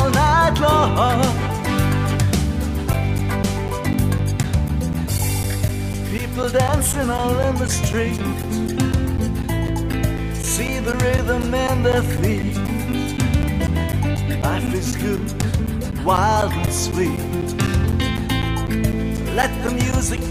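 From 2.93 s to 20.18 s, periodic USB or driver dropouts tick every 0.25 s. Each stall silences about 10 ms, some seventy times.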